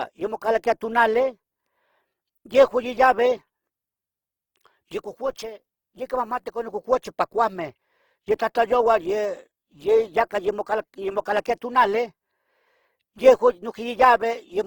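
The speech carries Opus compression from start to finish. The damage is plainly audible. The sound is grainy and rough, with a noisy texture where tonal detail should be. The encoder is likely running in its CELT music mode, keeping each band's energy but filling starved bands with folded or noise-like content. That fits a low bitrate of around 16 kbps. Bandwidth stays full, with content reaching about 20.1 kHz.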